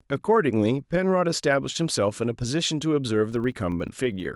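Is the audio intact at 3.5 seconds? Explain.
No. From 3.32 s to the end, a filter restarted on every block resets its state, leaving a 25 Hz buzz that tracks the speech level, seen as evenly spaced vertical spikes in the waveform and spectrogram.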